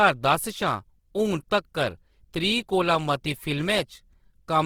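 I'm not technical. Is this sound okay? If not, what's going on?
No. Throughout, the speech sounds grainy and rough, likely from Opus compression: squeezed too tightly, it fills lost detail with noise instead of the real sound.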